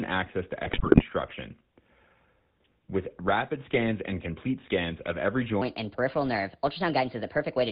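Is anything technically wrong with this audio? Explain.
Yes. The speech carries three technical faults.

Throughout, the sound has the buzzy, gravelly roughness of the GSM full-rate codec, which fits 13 kbps GSM. It rebuilds the voice from a vocal-tract model driven by sparse, regular pulses. Nothing above 4 kHz survives, so the voice sounds thin and rasping.

From 0.64 to 1.03 s, just after "access to", GSM bit errors break the voice into squawks, pops and gargling. Corrupted bits reached the decoder. Damaged filter, pitch and gain values warped the spectrum and threw the level around, frame by frame.

From 5.62 s to the end, just after "complete scans of every", there is a section at the wrong speed. It runs 1.29 times fast and about four semitones high, so the voice sounds hurried and raised. This was likely caused by playback against the wrong clock.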